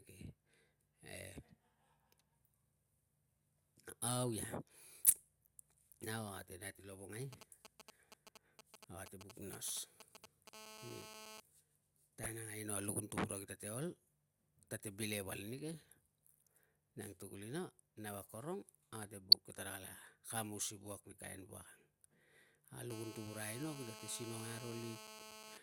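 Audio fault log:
5.00–5.10 s, 12.18–12.26 s and 19.30–19.34 s: corrupt frame decoded. Each spot is a short chirpy blip lasting a few frames. Damaged bits got played through anyway, so energy lands at the wrong frequencies. Peaks are roughly −20, −25 and −10 dBFS, and the last one is the loudest.
7.33–10.49 s: GSM signalling bursts. A galloping dit-dit-dit of short buzzes, around 10 dB under the speech. A nearby 2G phone is sending short groups of bursts at 216.7 Hz while signalling, and the audio circuit is rectifying them.
10.53–11.40 s and 22.90–25.58 s: GSM phone buzz. A hard, raspy, harmonic-rich 216.7 Hz buzz sits about 10 dB below the speech and doesn't follow it at all. The phone is now transmitting in bursts 216.7 times a second in a call, and its pulses are being rectified.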